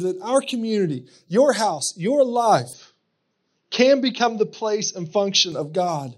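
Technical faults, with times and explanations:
2.73–5.52 s, input switched to a poorer device: the speech abruptly loses everything above 6.3 kHz and turns duller, with faint new background noise, no gap and no level jump, then clears again. This likely reflects a change to a narrower-band microphone.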